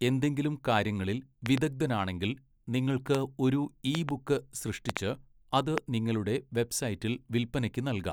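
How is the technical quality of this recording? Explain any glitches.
The recording is marred by a recurring loud pop, heard five times in this speech clip. Something in the chain, likely a faulty connection or a driver glitch, injects sudden voltage pulses, and the downstream circuitry shapes each into a sharp click standing well above the speech, which continues underneath. A double pop comes at 1.46 to 1.60 s, after "എന്തെങ്കിലും കാര്യങ്ങളിൽ", at roughly 15 dB above the signal. The others are about 20 dB above it: a single pop at 3.15 to 3.17 s, before "ഒരു ഇ ബുക്ക്"; a double at 3.95 to 4.11 s, after "നിങ്ങൾക്ക് ഒരു ഇ"; a double at 4.89 to 4.99 s; and a single at 5.78 to 5.80 s.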